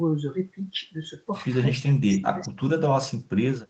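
From 1.83 to 2.78 s the speech is likely suppressed in double talk: the echo canceller treats the near-end talker overlapping the far-end sound as echo and ducks it, dropping about 30 dB at worst over roughly 0.7 s. The waveform shows chopped, collapsed stretches, and the spectrogram shows gaps beneath the 8 kHz band edge.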